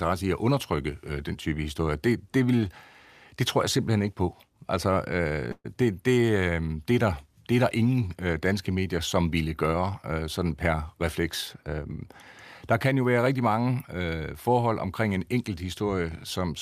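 At 5.51 s the speech stalls for about 150 ms in a call audio freeze, picking up again at 5.66 s. The last bit of sound gets stretched into a fading buzzy smear for roughly 130 ms, drops to about 40 ms of silence, then carries on right where it left off. Packets were likely held up in transit and the jitter buffer ran dry, so nothing's lost, but everything after lands 130 ms late.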